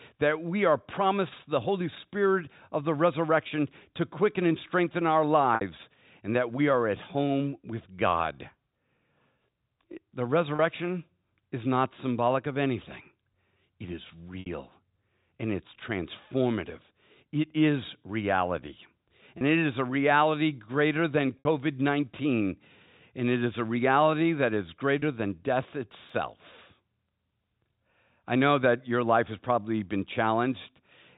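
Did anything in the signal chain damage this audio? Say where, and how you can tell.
Yes. At 5.55, 10.56, 14.4, 19.38, 21.39 (after "a reality greater than") and 24.99 s (between "a reality that is" and "than death"), the sound briefly holds on a buzzy, repeated tone for 60 or 30 ms. That is packet loss with pitch repetition at the network stage: the receiver loops the last pitch period to cover gaps that fit one or two 30 ms packets.

From 25.74 to 26.27 s, just after "than death", four tiny clicks, the longest about 0.7 ms, come at a steady rate. These are CD scratch ticks from storage and playback, where a surface blemish defeats error correction once per revolution and the player interpolates or mutes the damaged samples.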